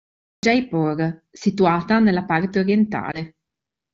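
Speech carried over the AMR wideband (HD Voice) codec, where band-limited, lightly coded detail points to one of the higher AMR-WB modes. The clip has a cut-off start: digital silence runs from 0.0 to 0.43 s, and the audio then begins abruptly in the middle of a sound, with no attack or fade, because capture began late. A lost AMR speech frame follows at 3.11 to 3.22 s. One 20 ms frame failed its radio checksum, so the decoder repeated the previous pitch and vocal-tract settings at reduced gain, producing a brief dip or warble before normal decoding resumes.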